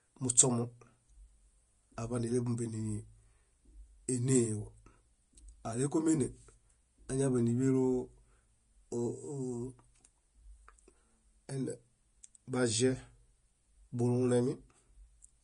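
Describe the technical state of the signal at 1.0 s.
At 1.0 s the speech is passing through what is likely Vorbis compression at a low bitrate, which fits about 32 kbps. The treble is coarsely quantised and cut off above 10.6 kHz, so the sound is hissy and grainy throughout, with roughened tones and softened attacks.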